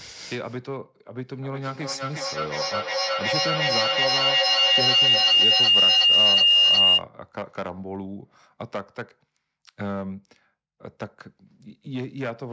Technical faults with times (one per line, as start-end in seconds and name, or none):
0.00-12.52 hard clipping
1.37-7.08 feedback howl